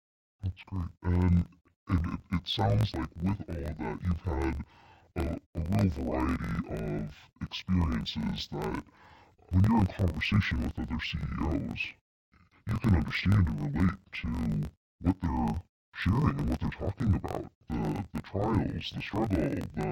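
Speech, with interleaved audio read as planar throughout. The voice sounds an octave low and doubled. A buzz at about 46 Hz follows the 21.77 ms blocks.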